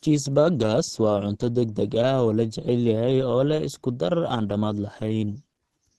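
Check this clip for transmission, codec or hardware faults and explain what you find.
Opus compression, likely, runs throughout: a low-rate speech-oriented mode, consistent with about 16 kbps, cuts everything above 12.1 kHz, leaving the speech muffled and hoarse.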